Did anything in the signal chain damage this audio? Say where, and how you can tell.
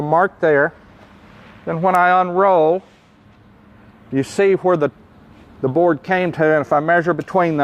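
No, nothing along the chain seems to have harmed this audio, and there's no point in it where a stage can be heard stumbling.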